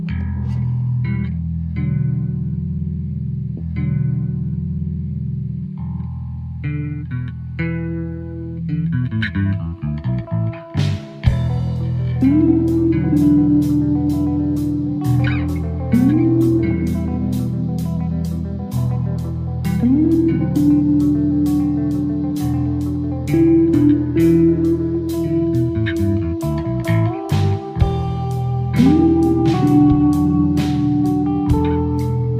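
A stream segment is repeated early in this audio: from 3.57 s to 5.57 s, two seconds of material play a second time, with a small blip where playback jumps back to the start of the copy. The player has fetched or queued the same chunk twice, so the programme gains 2 s rather than losing anything. A long, clean repeat of intact audio marks it as a duplicated segment, unlike a buffer stutter, which loops a few milliseconds rapidly, or a dropout, which leaves a gap.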